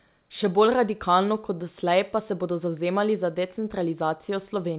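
No technical faults can be heard in the recording. The speech comes over a normally working call path, with nothing above 4 kHz and the usual coding grain that fits a G.711 A-law codec at 64 kbps.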